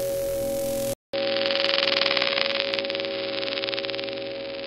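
At 0.93 s the sound drops out for 200 ms, then returns duller and boxier through to the end, with nothing above 5.2 kHz and a new noise floor roughly 30 dB down at an unchanged level. The cause is likely an input switched to a poorer device. A spectrogram shows a blank gap and then a hard ceiling at 5.2 kHz.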